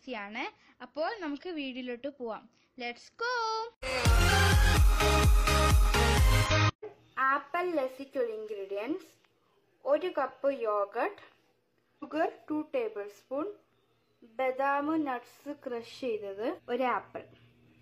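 Brief glitches break the sound at about 6.46 s, 11.99 s and 16.54 s, each roughly 50 to 60 ms long: damaged data in a compressed stream, where the decoder loses frame sync.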